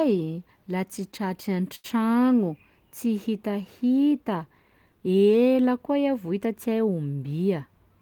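At 1.75 to 1.86 s, a short stall from a late packet holds one sound for about 88 ms, adding a slight buzz or dip; unlike a dropout, nothing is lost and speech resumes from the same place.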